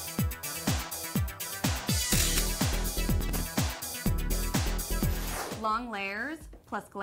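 Processor overload crackle runs from 3.20 to 3.41 s. The processor falls behind on its audio buffers, each around 3 ms, missing roughly ten deadlines. Each miss replays stale audio with hard edges, producing a short gritty burst of crackle.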